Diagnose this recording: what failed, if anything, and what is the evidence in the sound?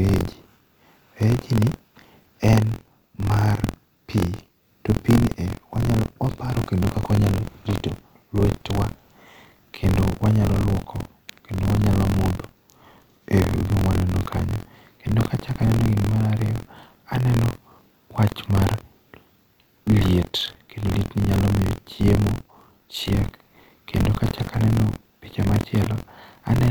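Buffer tearing at the driver or buffer stage, throughout. A rattling buzz near 43.1 Hz rides on the speech and stops in pauses, fitting a 1024-sample buffer. Writer and reader have slipped, so about a tenth of each period replays audio some 50 ms old.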